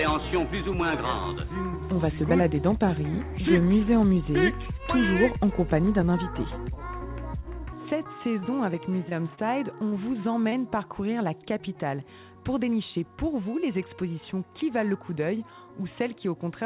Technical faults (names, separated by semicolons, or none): repeated stalls (stutter); short concealed packet loss; short stall from a late packet